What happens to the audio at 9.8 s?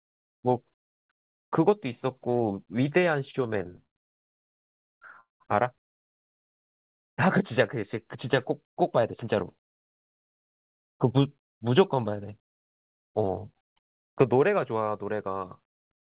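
At 9.8 s a jitter buffer speed-up runs from 7.83 to 10.89 s: the receiver trims short pitch-period chunks to drain excess buffered delay, so speech plays about 5% faster at unchanged pitch, sounding slightly hurried.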